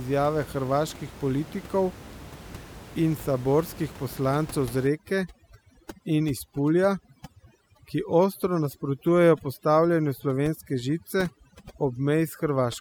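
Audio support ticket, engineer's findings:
Overdone noise removal, 4.87 s to end (12.80 s): suppressor set too aggressive, gating bands near noise estimate; background collapses to twinkling specks. Room noise before, about 18 dB under speech.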